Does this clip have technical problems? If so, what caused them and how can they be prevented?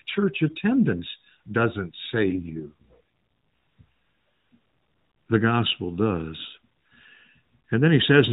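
Yes. From 2.24 to 2.97 s the speech turns rougher and more synthetic, with a buzzy edge. The bandwidth stays the same and there is no gap. This is an AMR rate drop: a weak radio link made the network switch the codec to a much lower mode, spending the freed bits on error protection, which fits a fall from 12.2 to 4.75 kbps before the rate recovered. Around it, the narrowband mobile path carries nothing above 4 kHz. Better signal strength or a more stable radio link, or a wideband or VoIP route, would keep the codec at its higher rate.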